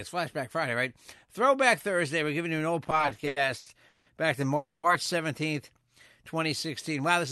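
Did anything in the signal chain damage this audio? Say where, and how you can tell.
Yes. From 2.87 to 4.08 s, just after "giving you an old", the speech drags and stutters. There are fourteen brief stalls, the longest 180 ms, each filling the gap by stretching the last sound, about 450 ms in all, with nothing lost. These repeated stalls (stutter) come from the network stage: packets arrived late and the jitter buffer kept running dry.

After "back to", the sound freezes from 4.56 to 4.85 s. The last sound is held and fades, with about 70 ms of silence, then the audio resumes exactly where it stopped. This call audio freeze was likely caused by packets held up in transit, emptying the jitter buffer and adding 270 ms of delay.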